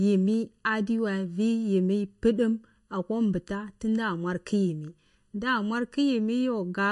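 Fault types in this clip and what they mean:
Channel delay (comb filtering): One channel runs under a millisecond behind the other before they're summed to mono, so the speech sounds hollow and phasey, with fixed notches starting around 700 Hz and repeating at even spacing up the spectrum.
MP3 compression: The speech has plainly audible codec damage, with a watery or swirly quality and nothing above 11.2 kHz. That's likely MP3 at a low bitrate, which fits something around 48 kbps, where weak frequency lines keep dropping in and out between frames.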